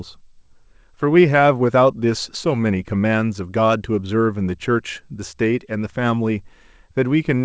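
No technical faults can be heard in this speech. It has the character of a WebRTC call path, with nothing above 8 kHz, which points to a wideband call codec such as G.722.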